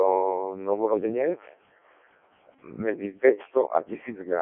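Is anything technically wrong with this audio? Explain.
Yes, the whole clip has been through a Codec 2 vocoder, and hard. The decoder doesn't keep the original waveform. It rebuilds the speech from sine waves using only pitch, voicing, energy and a rough spectral envelope. The heavy damage here fits the lowest setting, about 700 bit/s. The result sounds robotic and buzzy, squeezed into a radio-style band from 250 Hz to 3.4 kHz, with nothing at all above 3.6 kHz.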